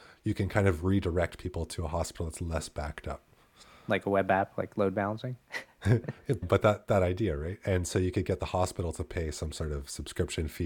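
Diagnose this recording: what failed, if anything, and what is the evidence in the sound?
Nothing failed; no stage shows any fault.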